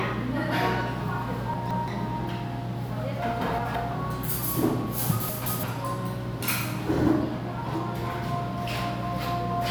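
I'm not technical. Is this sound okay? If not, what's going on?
No. Chunks out of order at 1.54–1.88 s, 3.41–3.76 s and 5.29–5.63 s: each time, a slice of sound about 0.17 s long plays one slice too late, swapping places with its neighbour. Nothing goes missing, but each spot sounds briefly jumbled.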